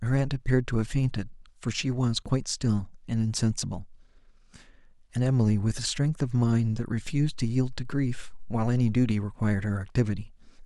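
At 7.07 s a DC step shifts the waveform's zero line by about -35 dBFS, as from a converter recalibrating or an offset input being switched in. A low thump marks the jump, and the offset lasts until 9.11 s while the speech continues unchanged.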